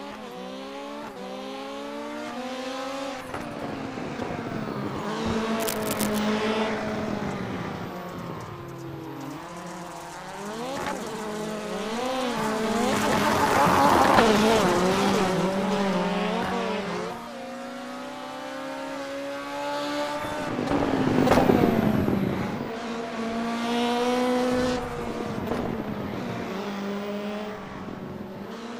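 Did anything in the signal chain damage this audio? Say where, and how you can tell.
Yes: cable scratch noise at the analogue wiring stage, from 5.60 to 6.18 s, likely a worn cable or connector shifting so its contact resistance jumped rapidly. That adds dense, uneven scratching bursts only a few decibels below the sound itself.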